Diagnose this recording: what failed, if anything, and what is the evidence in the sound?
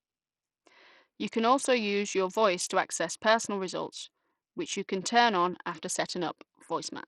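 Codec stage. Throughout the speech, treble flickers and drops out under gritty noise. Likely Bluetooth SBC compression, whose low bitrate, near 64 kbps, starves the top sub-bands.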